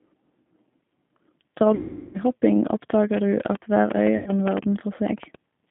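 Throughout, the speech carries the rough, slightly synthetic texture of the G.729 codec. The line band runs from about 150 Hz to 3.5 kHz, and the pulse-coded excitation leaves plainly audible damage. The sound fits an 8 kbit/s low-rate VoIP encoding.

From 1.75 to 2.18 s, VoIP packet loss concealed by the speech codec replaces about 390 ms of audio. The decoder keeps repeating its last pitch and filter at falling gain, so the sound smears into a fading buzzy tone or coloured noise before recovering weakly.

From 3.14 to 5.36 s, a train of clicks runs over the audio: around fifteen sharp ticks at roughly 6.4 per second, unevenly spaced and peaking well above the signal. The regular shape of the clicks suggests likely interference or a struggling interface.

Within that stretch, from 4.17 to 4.31 s, a second concealed packet loss covers about 90 ms. A shorter decaying fill, a buzzy tone or coloured noise, briefly replaces the sound before the decoder recovers.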